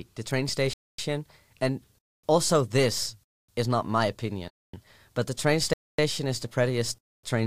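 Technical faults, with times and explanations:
0.73, 1.98, 3.23, 4.48, 5.73 and 6.98 s, gap between chunks: the speech was delivered in 1-second chunks, and each join was left with 250 ms of silence instead of butting straight onto the next chunk. Nothing is cut from the speech itself, but the flow stops dead at every join, so the listener hears six equally long holes recurring every 1.25 s, a regular stutter that breaks up the natural rhythm of the speech.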